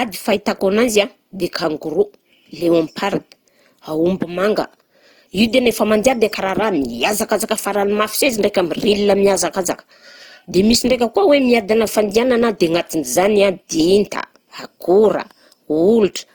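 From start to finish the speech has a grainy, rough texture, with the highs turning noisy rather than clean while the full top end stays open to about 20.2 kHz. That's likely Opus compression in its music mode, filling starved bands with noise, which fits roughly 24 kbps.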